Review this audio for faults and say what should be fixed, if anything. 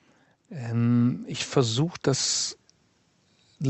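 Automatic gain rising runs from 0.48 s to 2.43 s: the gain control judged the speech input too quiet and pushed its gain up by about 8 dB over roughly two seconds, so the voice and the background noise swell together rather than the voice alone getting louder. On a waveform the envelope widens steadily across that span, and on a spectrogram the whole picture brightens evenly, including the noise floor between syllables, up to the call codec's 8 kHz ceiling. To prevent it, set a proper fixed input level at the microphone or preamp and disable or slow the automatic gain control so it has no reason to ramp.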